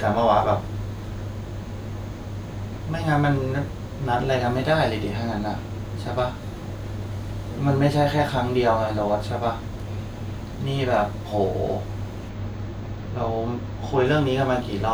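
From 12.30 s to 14.05 s, channel delay (comb filtering) sets in: one channel lags by roughly two samples, about 0.05 ms, so the mono sum cancels near 10 kHz and the speech turns dull. A spectrogram shows a dark horizontal notch there.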